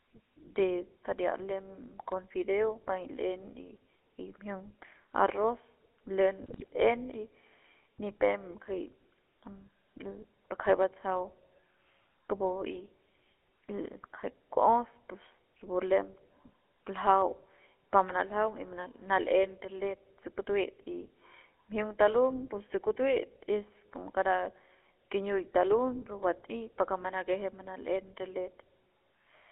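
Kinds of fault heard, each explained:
GSM full-rate codec: Throughout the clip, speech has the buzzy, gravelly roughness of the first GSM phone codec, with the band held to roughly 300 Hz to 3.4 kHz, as on a phone line. The codec rebuilds the voice from a vocal-tract filter excited by a sparse, regularly spaced pulse train, keeping only a fraction of the excitation detail at around 13 kbps. That coarse excitation is what gives the plainly audible grit.
GSM bit errors: From 6.42 to 6.65 s the speech breaks up into squawks, pops and gargling for about a quarter of a second. This is what corrupted bits reaching the GSM decoder sound like. When the filter, pitch or gain values arrive damaged, each affected frame is rebuilt with a warped spectrum or a wrong level. A run of roughly a dozen 20 ms frames hit in a row produces this brief burst of mangled sound.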